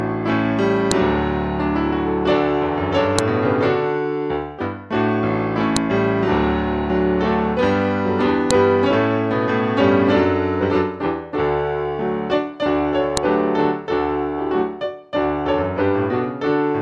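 Five sharp, loud clicks at 0.91, 3.19, 5.77, 8.51 and 13.17 s are a file header played as audio. At each joint the header bytes are reproduced as samples. Each appears as a sharp waveform spike and a thin vertical broadband line on a spectrogram.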